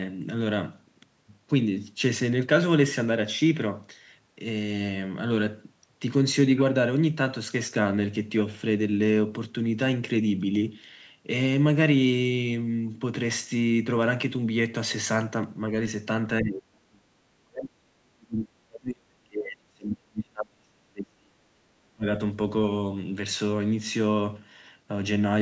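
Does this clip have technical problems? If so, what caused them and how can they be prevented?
Yes. From 16.41 to 17.11 s, and again from 17.39 to 22.06 s, the speech sinks sharply, falling by roughly 35 to 40 dB at its deepest. This is likely speech suppressed in double talk: with both ends talking at once, the echo canceller could not separate this talker from loudspeaker echo and attenuated everything. A dropout would be clean silence. These dips come while the far side's sound plays instead. Using a headset, or an echo canceller with better double-talk detection, prevents it.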